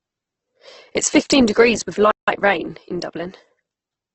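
Opus compression runs through the whole recording: the speech has nothing above 8.1 kHz, and its tones come out noisy, rough and grainy. The encoder is likely in its music-oriented CELT mode, keeping the energy of each band but filling starved bands with folded or noise-like content. At this heavy level of damage, the narrowed wideband response and coarse texture fit a rate around 12 kbps.

A playback stall follows from 2.11 to 2.28 s, just after "is fifteen degrees with". The sound cuts out mid-flow for 165 ms of silence, then resumes with "rain in". The likely cause is the player running out of data or its output thread being blocked, leaving nothing to play until it caught up and continued.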